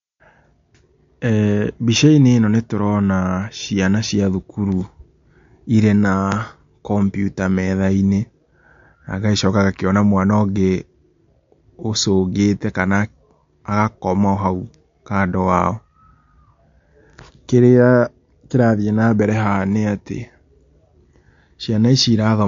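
Speech runs the whole way with MP3 compression damage, likely from a low-bitrate encode near 48 kbps. Nothing sounds above 7.2 kHz, and the warbling, watery texture marks it apart from simple low-pass filtering.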